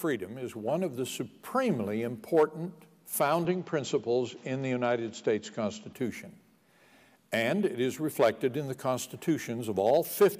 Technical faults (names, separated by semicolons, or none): input switched to a poorer device